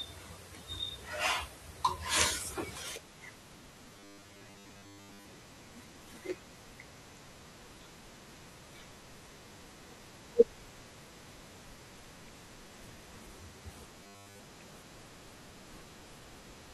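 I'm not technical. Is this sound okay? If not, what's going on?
No. From 3.94 to 5.25 s, and again from 14.04 to 14.40 s, the speech turns into a stiff, metallic 100 Hz buzz: robotic sound from repeated short buffers. Audio likely arrived late, so a chunk of about 10 ms was replayed over most of the first stretch and all of the second.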